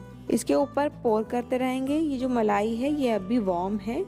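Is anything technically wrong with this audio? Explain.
No, there's nothing technically wrong with this audio.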